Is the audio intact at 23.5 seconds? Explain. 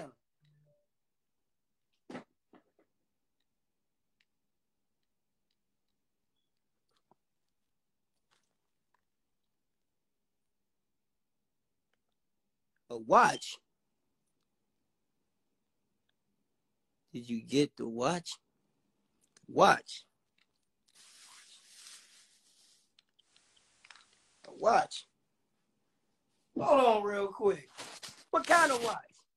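No. From 23.19 to 25.15 s, digital radio blending to analogue: a 160 ms cross-fade to FM brings up faint hiss, unlike a codec bandwidth drop, which adds no hiss.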